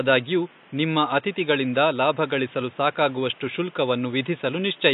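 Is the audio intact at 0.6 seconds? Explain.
No. Likely AAC compression at 0.6 s and throughout: the speech sounds dull and smeared with fizzy sibilants, as a low bitrate near 32 kbps cuts highs and coarsens the spectrum.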